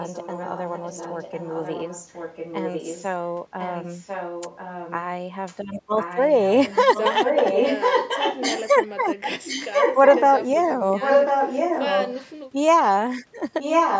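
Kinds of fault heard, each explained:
echo leak: A delayed copy of the speech trails it by about 1.05 s, faint near the start and growing to nearly the speech's own level later on. The likely cause is a loudspeaker at the other end whose echo canceller let its microphone pickup return down the call.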